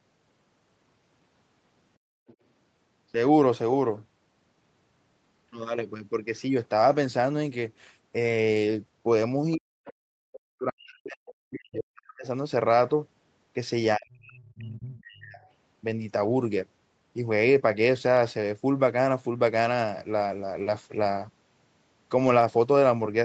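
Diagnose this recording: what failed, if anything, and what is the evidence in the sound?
Background gated by the echo canceller, in call processing. From 1.98 to 2.27 s the room sound collapses by about 38 dB for roughly a third of a second, then returns. The canceller clamped the microphone hard while far-end audio played from the loudspeaker.

Other side's voice leaking through, also in call processing. Faint second-voice fragments appear at 2.27 to 2.35 s, 9.52 to 9.56 s and 9.85 to 9.93 s. They sit some 30 dB below the speech, rising to around 20 dB below at 9.85 s. This is likely residual loudspeaker echo that the canceller failed to subtract.

Speech suppressed in double talk, in the echo-cancellation stage. The talker's speech drops by around 40 dB at 9.55 to 9.8 s, 10.06 to 12.25 s and 13.96 to 15.41 s. The likely cause is the canceller misreading overlapping near-end and far-end speech as echo and attenuating everything.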